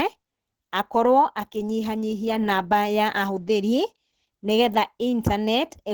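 Starved of bits, the encoder has most likely fallen back to Opus compression in its hybrid speech mode, which fits a rate near 16 kbps. Throughout, the speech sounds plainly muffled and hoarse, with grainy, roughened tone, though content still reaches about 20.2 kHz.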